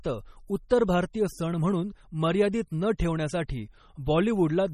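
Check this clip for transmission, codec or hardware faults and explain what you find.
Two faults stand out: a heavy compression texture that runs through the whole speech clip, and one brief pre-echo early on.

From start to finish the speech sounds watery and swirly, with sibilants breaking into metallic chirps and consonant onsets smeared. Nothing is heard above 15.3 kHz. The likely cause is MP3 compression at a starved bitrate, consistent with something near 32 kbps. The encoder sheds the treble at a fixed ceiling and drops weak frequency lines, which flicker in and out from frame to frame, producing that shifting, bubbling surface.

At about 0.69 s a hiss of around 17 ms arrives just ahead of a sharp attack, and the attack itself lands soft rather than crisp. This is pre-echo. The codec spreads its quantisation noise across an entire transform block, so noise sized for the loud onset near the end of the block also fills the quiet gap before it.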